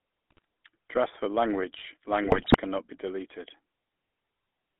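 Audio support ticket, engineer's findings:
GSM full-rate codec, entire clip: buzzy, gravelly speech, band limited to about 250 Hz to 3.5 kHz. A vocal-tract filter is driven by coarse, regularly spaced excitation pulses, which fits 13 kbps full-rate coding. The roughness is plainly audible on every phrase.

GSM bit errors, 0.30 to 0.45 s and 2.24 to 2.57 s (after "for language", before "cannot be deleted"): squawks, pops, gargling. Corrupted filter, pitch and gain values reach the decoder and distort spectrum and level per frame. The second burst is longer, with a higher error rate.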